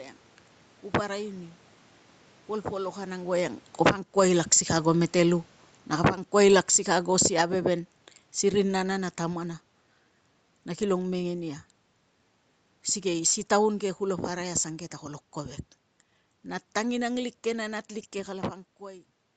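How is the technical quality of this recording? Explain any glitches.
The recording has two level faults, both from the automatic gain control, overlapping between about 3.7 and 9.5 s. The call path's band limit at 8 kHz and some room noise are audible throughout.

Automatic gain falling, 3.68 to 9.5 s: the gain control judged the input too loud and lowered its gain by about 11 dB over nearly six seconds. The speech starts loud and then slowly sinks, with the room background dropping along with it.

Automatic gain rising, 3.92 to 4.97 s: inside that fall, the controller briefly judged the input too quiet and raised its gain by about 8 dB over roughly a second. Speech and background swell together before the downward slide resumes.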